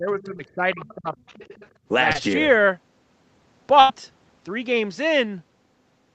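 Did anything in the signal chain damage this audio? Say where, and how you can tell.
Yes. The damage comes from the call processing and the network rather than from wiring, converters or storage.

Speech suppressed in double talk, in the call processing stage: over the first 1.15 s, the talker's voice dips and breaks up, with the deepest drop about 20 dB down and roughly a second of sound affected in all. This is likely the echo canceller failing to tell the near talker from loudspeaker echo while both sides spoke at once, so it attenuated everything it heard, including the wanted voice.

The other side's voice leaking through, also in the call processing stage: a faint second voice sits under the talker at 0.20 to 0.25 s, 0.74 to 0.94 s and 1.20 to 1.68 s, about 20 to 25 dB below the main speech. The likely cause is residual echo. The far end played out of the loudspeaker, reached the microphone, and the canceller left part of it in the signal.

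Short concealed packet loss, in the network stage: brief smears occur at 0.37 to 0.41 s and 2.13 to 2.16 s. In each case about 20 ms of audio failed to arrive in time. The decoder extended the preceding sound to cover the hole, for 11 ms in the first case and 19 ms in the second, before blending back into real audio. The result is a momentary smear or wobble, and a short consonant there can disappear.

Burst of packet loss, also in the network stage: at 3.80 to 3.91 s, roughly 100 ms went missing. Concealment filled about 90 ms of it by stretching the last sound and fading it, which gives a held buzz or a fading hiss. Real audio then resumes further along, with the section in between simply gone.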